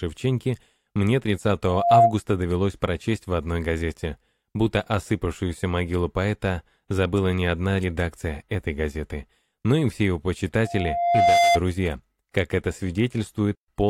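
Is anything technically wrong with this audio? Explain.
Yes. From 1.66 to 2.15 s, and again from 10.64 to 11.60 s, a steady 691 Hz tone swells quickly, and then more slowly, into a squeal standing about 10 dB, then about 5 dB, above the sound. This is loudspeaker feedback squeal: the microphone re-amplifies its own loudspeaker, and the loop gain exceeds one at that frequency.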